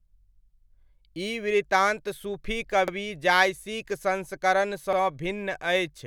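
At 0.83–0.88 s, 2.88–2.93 s and 4.93–4.98 s, overlapping chunks replay 50 ms of speech at each 2.0 s join, causing a regular stutter-click. The waveform shows a duplicated segment and a discontinuity, and the spectrogram shows a thin vertical broadband line at each join.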